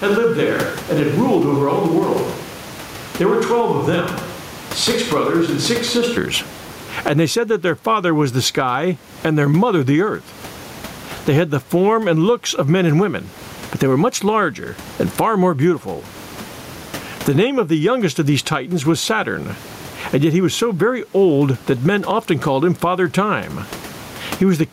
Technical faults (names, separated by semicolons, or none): gain pumping; switch to a distant microphone